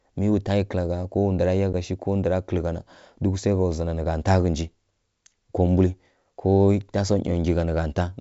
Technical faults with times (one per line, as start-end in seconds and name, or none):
1.73 packet loss on an ADPCM call